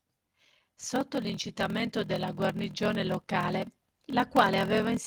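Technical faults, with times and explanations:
Throughout: block size mismatch (padded). A steady buzz at 41.7 Hz runs under the speech. Each block ends in a short stretch of silence, and that gap repeats at the block rate. The speech plays at 0.889 times normal speed while its pitch stays about normal. This points to 1024-sample blocks being read into slots roughly 1152 samples long.
3.47–3.49 s: lost packet rebuilt from error correction. There is no dropout here. Instead, 20 ms of speech sounds rougher and noisier. This fits one lost packet replaced by the low-bitrate backup copy carried in the next packet.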